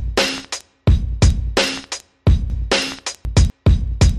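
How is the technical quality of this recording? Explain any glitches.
The recording has one clear glitch; apart from that span nothing else is being judged here.

Chunks out of order, from 2.50 to 3.50 s: a 250 ms block of audio was delivered or written three chunks too late, so it plays after the three blocks that should have followed it. Nothing is missing, but the sequence is scrambled, leaving three hard joins between mismatched audio. The result is a brief jumbled, garbled passage.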